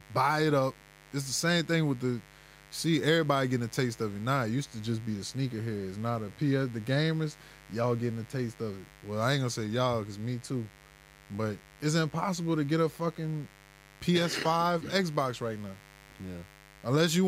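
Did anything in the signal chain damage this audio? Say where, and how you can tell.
Yes. Mains buzz, entering in the analogue wiring, sits under the speech for the whole clip, roughly 25 dB below it. It is raspy, not a smooth low hum, because switching spikes twice per 50 Hz cycle spray harmonics up into the kilohertz range.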